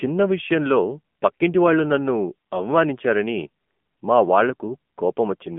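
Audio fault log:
Throughout: AMR narrowband mobile codec. The speech sounds boxed-in and thin, with a buzzy, synthetic edge to every voiced sound that is plainly audible. Everything above roughly 3.4 kHz is gone and the lowest bass below about 200 Hz is missing, which fits a phone line. The coder rebuilds the voice from a vocal-tract model excited by sparse pulses. At a rate that points to about 7.4 kbps, those pulses are too few to carry natural texture, hence the buzz.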